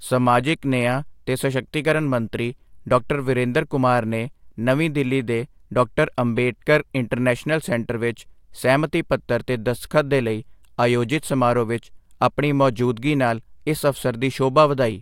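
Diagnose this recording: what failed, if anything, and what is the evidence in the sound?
Nothing failed in this recording, and the sound gives no evidence of any fault at any stage.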